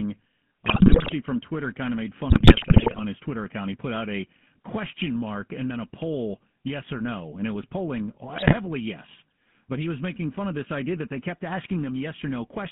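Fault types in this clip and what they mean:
GSM full-rate codec: The speech is coded by a pulse-driven vocal-tract model throughout. The band runs about 150 Hz to 3.5 kHz, with plainly buzzy, gravelly roughness.
GSM bit errors: Flipped bits corrupt the decoder's filter and gain values. Garbled bursts hit at 0.66 s, after "kind of made", and after "and it was polling".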